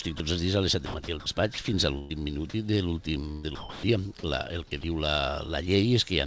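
At 0.18 to 0.20 s and again at 4.81 to 4.83 s, about 20 ms of sound drops out to steady noise, likely the voice detector treating it as background.

The voice detector likely chops the sound at 0.86 to 1.26 s, 1.54 to 1.68 s and 3.32 to 3.83 s. Comfort noise replaces about 180 ms, 60 ms and 395 ms respectively.

A burst of packet loss at 1.98 to 2.12 s leaves about 120 ms missing. A concealed, fading continuation of the previous sound fills the gap.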